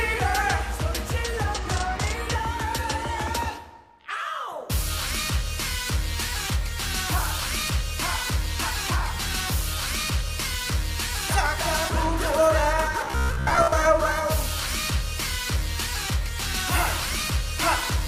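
From 13.05 to 13.72 s the sound becomes a rigid metallic buzz near 66.8 Hz: robotic sound from repeated short buffers, likely 15 ms chunks looped over most of the passage.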